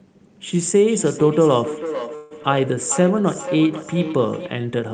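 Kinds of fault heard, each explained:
Feedback echo between two devices: a second device replays this call into a nearby microphone, so speech returns roughly every 0.4 s from 0.61 to 4.55 s, peaking about 11 dB below.
Call audio freeze: packets were likely delayed and the jitter buffer emptied, so from 2.15 to 2.33 s a fading buzz or hiss fills 153 ms before speech resumes intact.
Skip ahead: a stretch of audio was discarded while later packets waited, so at 2.43 s playback jumps forward, losing roughly 70 ms with the edges joined almost directly.
Jitter buffer slow-down: the receiver repeated pitch periods to rebuild its reserve, so from 3.00 to 3.69 s speech runs at 91% speed, stretched by 70 ms.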